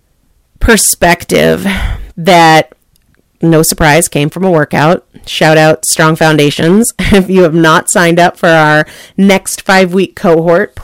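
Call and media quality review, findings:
Harsh fuzz on every loud syllable, whole clip. Hard clipping: speech driven about 13 dB past a stage's ceiling, roughly 7% of samples flattened, adding high harmonics.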